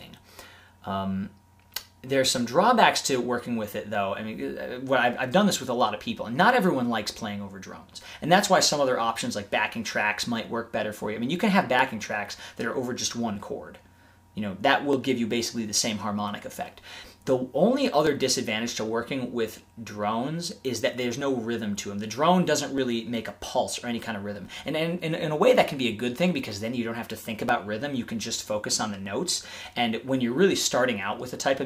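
A click recurs every 1.57 s from 0.81 s to 30.63 s, about twenty in all, and is likely caused by clock drift buffer slips, where mismatched device clocks a few hundred ppm apart force a few dozen samples to drop or repeat. Its steady spacing sets it apart from random dropouts.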